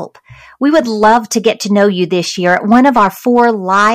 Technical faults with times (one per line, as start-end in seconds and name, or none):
0.00-3.94 hard clipping